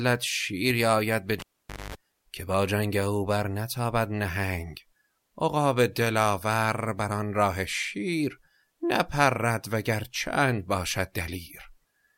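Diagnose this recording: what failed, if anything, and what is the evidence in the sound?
A pop at 1.40 s cuts the speech, then about half a second of near silence, including a 50 Hz mains buzz lasting about 0.23 s, and a second pop at 1.95 s brings the sound back. This is a cable pulled and plugged in, a fault in the analogue wiring. The live lead was yanked out and reinserted. While only the plug tip made contact, the unshielded, ungrounded conductor picked up mains hum before full connection restored the signal.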